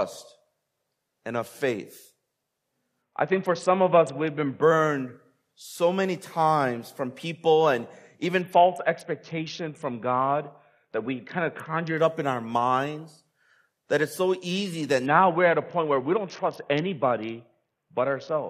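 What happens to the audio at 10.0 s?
At 10.0 s the speech is inside a Bluetooth SBC bit pool drop running from 8.41 to 11.97 s, between "times from people and" and "up in our minds". The sound fits the bit pool falling from 28 to 6, near 60 kbps, so the top sub-bands lose their bits and the rest are coarsely quantised. Treble dulls and gritty noise rises without any dropouts, unlike packet loss or a simple low-pass.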